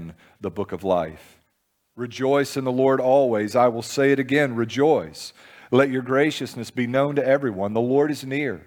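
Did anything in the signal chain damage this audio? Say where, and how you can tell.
No, nothing in the signal chain has damaged this speech recording, and no stage from capture to playback leaves an audible trace on it.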